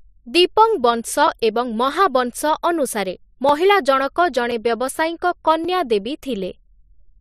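A sharp, isolated click lands at 1.84 s, right after "ଦୀପଂବଂଶ ଏବଂ". It is likely dropped samples: roughly a single sample missing, so the speech waveform jumps straight to a later value, far too brief to remove any sound.

Two more clicks follow at 3.49 s and 5.64 s. Each is a block of digital silence, about 1.7 ms and 5 ms long, where the output fell abruptly to zero and back with no fade at either edge.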